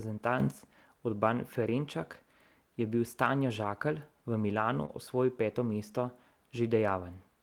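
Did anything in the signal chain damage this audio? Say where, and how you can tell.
Yes. At 0.40 s the speech and background noise jump together by about 6 dB, holding for about a tenth of a second to 0.52 s. The likely cause is a digital gain change in the driver or call processing, applied without a ramp.

Network damage shows as three lost packets rebuilt from error correction, at 1.17 s, 3.63 s and 4.88 s. Each covers 20 ms and sounds briefly rougher and noisier, because the decoder played the low-bitrate copy carried in the following packet instead.

At 4.85 s there is also a short concealed packet loss: about 20 ms never arrived in time, so the receiver extended the preceding sound for about 22 ms before blending back. It is audible as a brief smear running into the rebuilt frame.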